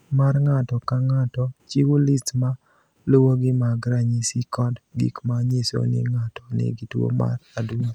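From about 0.46 s to 7.19 s there's a click roughly every 1.68 s through the speech, around five in all. That steady spacing is the signature of clock drift buffer slips: two clocks likely disagree by something like 100 ppm, so every so often the buffer drops or repeats a handful of samples.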